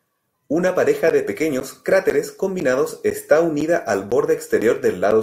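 From about 1.10 s through 5.12 s there's a run of periodic USB or driver dropouts: something is stalling the audio path every 0.5 s, and each time roughly 10 ms of the speech gets replaced with silence. You end up with about ten little gaps, evenly spaced, that come across as a steady tick or pop whenever the voice is going, landing like a metronome underneath the talking.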